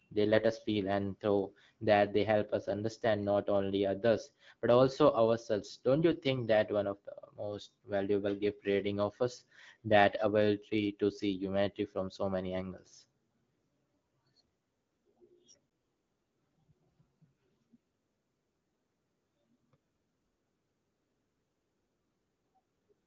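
At 6.12 s and again at 15.70 s there's an underrun with held sample: the output buffer ran dry, the converter froze on its last value, and the sound goes briefly flat, about 2 ms the first time and 12 ms the second, then resumes softly where it paused.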